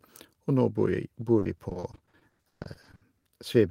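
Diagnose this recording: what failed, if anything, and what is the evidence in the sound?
The network stage failed: repeated packet loss (robotic sound) from 1.39 to 3.27 s, with around twenty dropouts covering about 760 ms, the longest 140 ms. Each hole was concealed by stretching the preceding sound, so the speech turns choppy with pieces missing.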